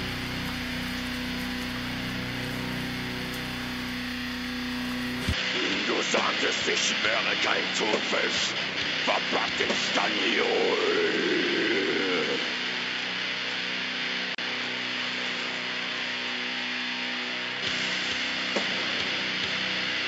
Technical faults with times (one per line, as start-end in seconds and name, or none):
5.33-20.07 input switched to a poorer device
14.35-14.38 gap at a join of encoded pieces